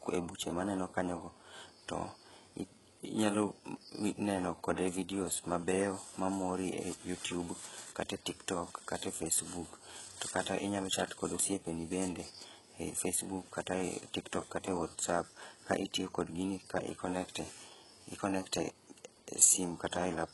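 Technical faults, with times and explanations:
Throughout, HE-AAC compression: the speech was likely squeezed through an HE-AAC encoder at a very low rate, which fits roughly 12 kbps. Only the lower spectrum is coded properly and the treble is synthesized from copied lower bands shaped by a coarse envelope, with nothing above 11.5 kHz. The damage is heavy. Sibilants come out gritty, metallic or lispy, because the rebuilt upper harmonics fail to line up with the real ones below the crossover.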